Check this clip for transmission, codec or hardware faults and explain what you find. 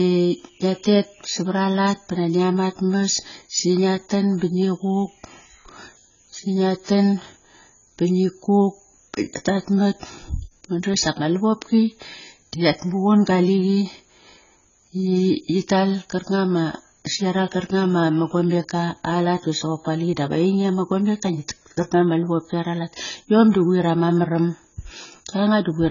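The recording shows one fault, present throughout: heavy AAC compression damage across the whole speech clip. The likely cause is AAC-LC encoding at a very low bitrate; the damage fits a rate around 16 kbps. Starved of bits, the encoder drops everything above 7 kHz and quantises the remaining frequency lines coarsely, leaving gaps in the spectrum. The speech sounds dull and band-limited, with a smeared, warbling texture on sustained sounds and a fizzy edge on sibilants.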